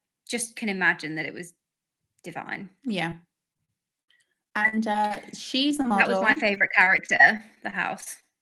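At 3.09 to 3.13 s there is a short concealed packet loss. About 20 ms of the call audio arrived too late to decode. The receiver bridged the hole by extending the preceding sound, which leaves a brief smear or wobble.

Repeated packet loss, heard as robotic sound, follows in three stretches: 3.53 to 5.25 s, 5.69 to 5.92 s and 6.32 to 8.24 s. Packets kept dropping, and each hole was patched by continuing the last sound before the next hole arrived. The first stretch has more than a dozen gaps, the longest 58 ms, and about 18% of it is concealed. The second has a handful of gaps up to 22 ms, with nearly a third concealed. The last has over a dozen gaps up to 37 ms, with about 16% concealed. The result is choppy speech with fragments missing. Throughout, the call codec's coding noise and high-frequency cut-off near 12 kHz are present, consistent with a WebRTC path at roughly 32 kbps.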